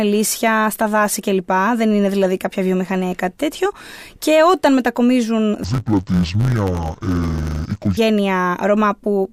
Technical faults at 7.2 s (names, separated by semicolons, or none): interleaved audio read as planar